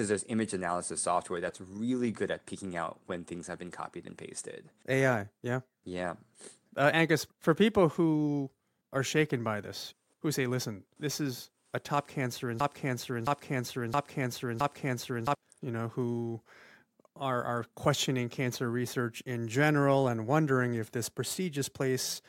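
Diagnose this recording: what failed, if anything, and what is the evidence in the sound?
A broken-record loop runs from 12.60 s to 15.35 s. Right after "is a top cancer", a fragment of about 0.67 s plays four times back to back, identical each time. Normal speech resumes at "you know who". The stage is likely the playback or streaming buffer. It stalled and kept re-sending the last block it held. Whatever was said during those 2.7 seconds is gone, not just delayed.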